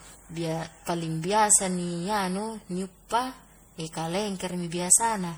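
Across the whole speech clip the sound is swirly, hollow and smeared, with softened consonant attacks and nothing above 20.9 kHz. This is generation loss, likely from repeated MP3 re-encoding, roughly five passes at what sounds like 64 kbit/s, each adding fresh quantisation noise and spectral gaps.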